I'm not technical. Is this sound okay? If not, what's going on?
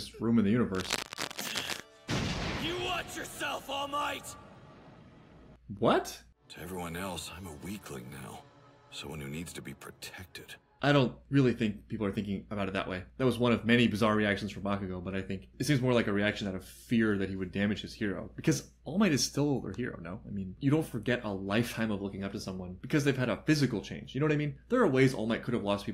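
No, there's one problem near the start. From about 0.74 to 1.80 seconds you'll hear a burst of scratchy, crackly rustling laid over the sound, fairly loud and nearly as strong as the sound itself. That's cable scratch noise. It's likely a worn cable, plug or knob being jiggled, so the electrical contact keeps flickering and spits out those uneven bursts of noise. It lasts about a second, then clears.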